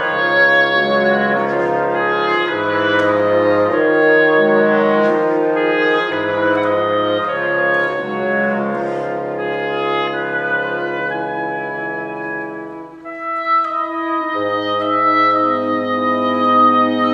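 Nothing in the audio stands out as a technical fault at any point.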